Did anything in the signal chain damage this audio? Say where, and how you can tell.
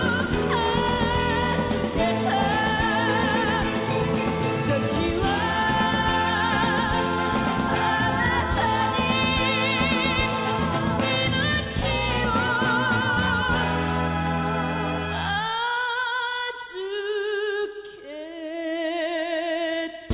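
No, nothing in the signal chain can be heard damaging this audio. There is no point in the clip where any stage leaves a mark on the sound, so there is no stage to name and no time to point to.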